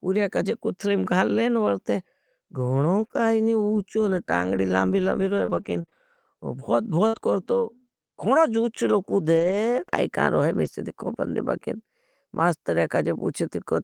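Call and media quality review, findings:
Scattered short gaps, 2.99 to 12.41 s: about seven brief ticks, smears and hiccups in otherwise continuous speech, none longer than around 50 ms. Probable component: jitter buffer and packet loss concealment. Lost or late packets, 200 ms missing in total, patched by extending the preceding sound, with 480 ms rebuilt. Unlike a sustained dropout or a burst loss, the holes are isolated and tiny, so there are no silent stretches or robotic drawn-out tails.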